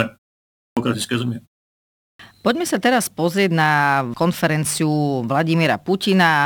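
An output device that drops into sleep during silence and is slow to wake again causes a clipped start after a pause in this speech. After pauses of 0.35 s and 0.49 s, the sound resumes abruptly at 0.45 s and 1.88 s with its first 0.32 s and 0.31 s missing.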